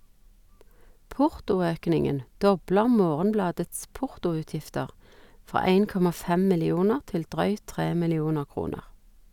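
No technical faults can be heard at any point in the speech.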